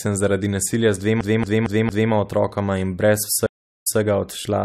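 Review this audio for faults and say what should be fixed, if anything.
A scratched disc is throwing the laser back one track at the same point on every revolution, which produces the CD stuck on one turn fault from 1.21 to 2.12 s. The same 0.23 s slice of speech plays four times in a row, with a brief mute at each jump, giving the quick, evenly spaced stutter of a skipping CD. Fix it by re-ripping from a clean disc with an error-correcting ripper.

The connection dropped and the player reconnected with a fresh decoder partway through the stream, causing a stream reconnect from 3.46 to 3.99 s. The speech stops for about 0.37 s of silence, then resumes 0.16 s earlier than where it cut off, because the server resent a burst of audio that had already played, so a short stretch is heard twice. Prevent it with a larger client buffer and seamless reconnection that resumes at the exact stream position.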